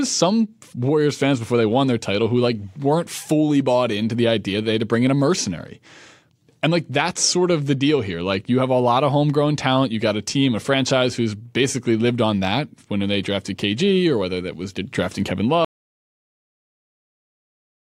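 At 15.65 s the speech stops abruptly in mid-flow and the clip stays completely silent to the end, about 2.3 s later. This is an audio dropout to silence, likely from the input being lost while recording carried on writing silence. What separates it from a fade-out or a noise gate closing is the hard cut with no decay and the total absence of room tone in the gap.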